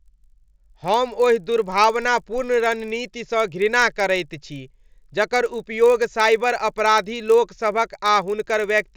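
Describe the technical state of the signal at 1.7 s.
A resampler restarted on every block is active at 1.7 s, as throughout the clip. Each 20 ms block, consistent with a 16 kHz to 48 kHz conversion, is resampled without its neighbours, leaving an edge error every block. The result is a 50 Hz buzz riding on the speech.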